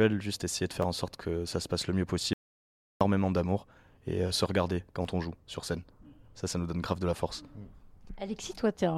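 At 0.82 s there is a repeated buffer. New audio arrived late, so one block of about 11.6 ms was played a second time, which fits a 512-sample buffer. It is heard as a brief click-like stutter with a hard join, and roughly 10 ms of speech is lost.

From 2.33 to 3.01 s is an audio dropout to silence, lasting 675 ms. The speech cuts off abruptly into silence with no room tone, then resumes mid-flow. The input signal was likely lost while recording continued.

From 5.03 to 5.05 s the same buffer fault recurs, with the 11.6 ms block played two extra times. This produces a short buzzy stutter and drops about 20 ms of speech.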